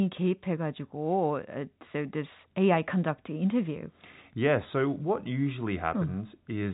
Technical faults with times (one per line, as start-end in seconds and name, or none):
none